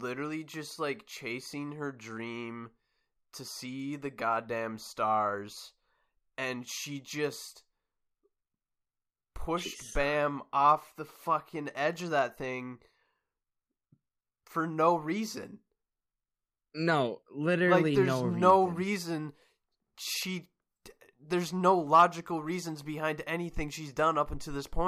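Nothing to flag: no technical faults can be heard at any point in the speech.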